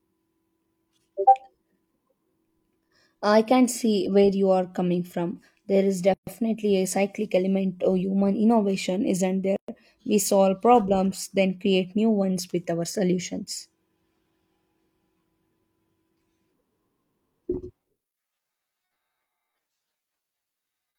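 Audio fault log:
6.14 s and 9.56 s: gap at a join of encoded pieces, about 130 and 120 ms of silence where separately encoded pieces meet with untrimmed encoder delay and end padding.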